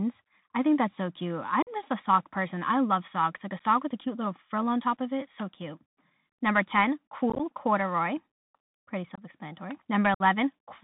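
From start to finish the speech runs through a Bluetooth CVSD headset codec at 64 kbps. Nothing above 4 kHz survives, and s sounds turn scratchy where loud high content outruns the adaptive step. A granular hiss sits under everything, which separates it from a clean low-pass filter's dull but quiet band limit.

Unconcealed Bluetooth headset packet loss first cuts about 45 ms at 1.62–1.69 s, between "think that's so cute" and "just a sock person." An 11 ms hole follows at 3.59 s, just before "with a cute little." At 7.30–7.41 s, roughly 52 ms of audio is lost in scattered short runs across about 98 ms, giving a rough, chopped crackle. Two more gaps fall at 9.15–9.22 s (about 23 ms) and 10.14–10.22 s (about 56 ms). Each is an abrupt-edged gap, and the speech returns briefly quieter. There is no smoothed or repeated fill, which is what marks these as unconcealed rather than concealed dropouts.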